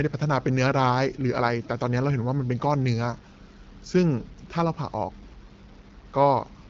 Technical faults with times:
0.00-6.69 low bit depth without dither

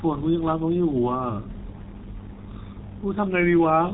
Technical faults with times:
0.00-3.94 G.723.1 codec

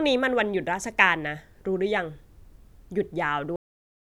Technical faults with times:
3.56-4.01 cut-off end

